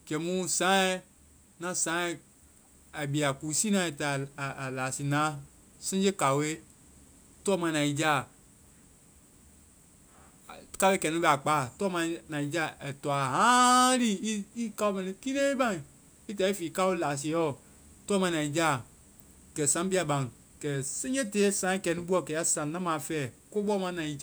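Nothing technical goes wrong anywhere in this speech recording, so there's no fault to point to at any moment.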